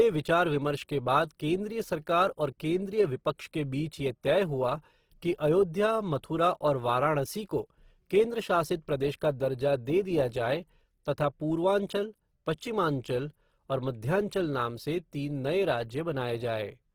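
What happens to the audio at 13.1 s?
At 13.1 s the speech carries the same damage heard across the whole clip: a grainy, rough texture in which tonal parts turn noisy instead of clean. This is likely Opus compression in its music (CELT) mode, at a rate that fits about 16 kbps. The encoder keeps each band's energy but, short of bits, fills detail with folded or noise-like content. The bandwidth stays full, reaching 20.4 kHz, so the damage is grain, not muffling.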